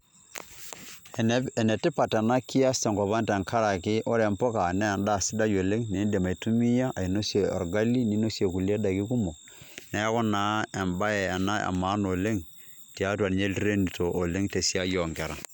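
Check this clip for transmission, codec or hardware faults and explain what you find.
There is one fault: word clock ticks across the speech from 0.59 s to 15.2 s. Sharp, uneven clicks recur about every one and a half seconds, around ten in total. The receiving device is running on its own clock rather than locking to the sender's, and the two rates differ by roughly 15 parts per million. Each time they slip past each other, a single sample is dropped or repeated, producing a tick.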